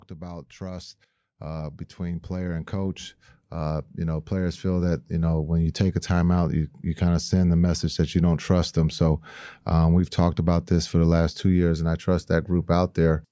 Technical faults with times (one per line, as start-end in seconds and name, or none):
0.09-5.42 automatic gain rising